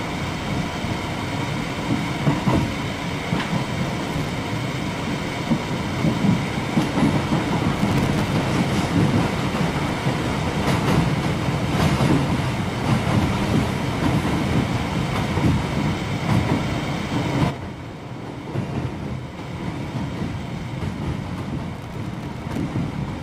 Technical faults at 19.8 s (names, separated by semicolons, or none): none